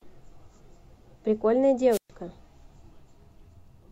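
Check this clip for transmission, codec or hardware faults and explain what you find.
One fault is present in this speech clip. A wireless microphone squelch dropout runs from 1.91 to 2.10 s. The analogue FM radio link fades, hiss briefly rises, then the receiver's squelch mutes the output, leaving a hole of near silence about 123 ms long before the voice returns.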